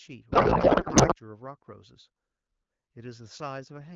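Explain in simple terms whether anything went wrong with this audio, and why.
From 0.31 to 1.14 s, the speech turns into garbled noise and warble that barely follows what is being said. This is a codec payload misread. The phone codec here is AMR wideband (HD Voice). The sending and receiving ends seem to have disagreed on how its data bits were packed. So the decoder read the bits in the wrong places and rebuilt nonsense. At 1.14 s the two sides match again, and the speech comes back clear.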